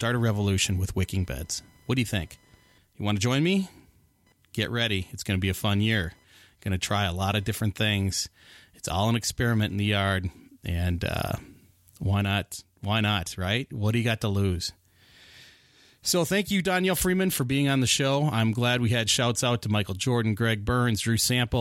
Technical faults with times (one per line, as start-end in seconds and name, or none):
0.00-9.84 computer activity noise